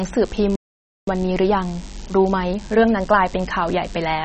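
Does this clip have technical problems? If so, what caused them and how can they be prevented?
Yes. A DECT cordless phone buzz runs through the whole recording. It is a thin, steady buzz at 100 Hz with a dense harmonic series, sitting roughly 25 dB below the speech. It comes from a nearby handset or base station whose 10 ms radio bursts are rectified in the audio circuitry. Keep DECT equipment well away from microphones, preamps and cables, and use shielded, properly grounded connections.

The speech is also dull and watery throughout, with nothing above 8.3 kHz and audible swirling and smeared consonants. The likely cause is MP3 compression at a low bitrate, around 32 kbps, where the encoder cuts the treble and switches weak spectral components on and off between frames. Encode at a higher bitrate or use a more efficient codec.

A playback stall silences the audio from 0.56 s to 1.07 s, a gap of about 0.52 s mid-flow. 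This is likely the pattern you get when the player runs out of buffered data or its thread is blocked. Larger buffers and a higher-priority audio thread help prevent it.

From 1.07 s to 3.13 s there is time-compressed catch-up. The speech plays at 1.25 times normal speed with unchanged pitch, as the player cuts and cross-fades short segments to clear its backlog. Preventing the stall removes the need for this catch-up.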